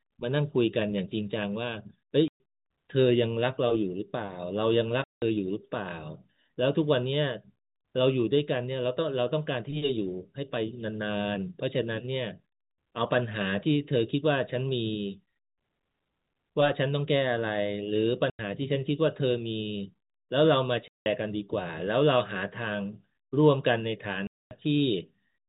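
Packet loss filled with silence cuts holes into this telephone-band speech at 2.28 s, 5.04 s, 18.3 s, 20.88 s and 24.27 s, lasting 120, 180, 90, 180 and 240 ms. Every gap is a multiple of 30 ms, which fits 30 ms packets going missing in runs. The receiver inserts dead silence in their place, so the sound stops abruptly and restarts with hard edges. The G.711 coding underneath keeps everything below 4 kHz.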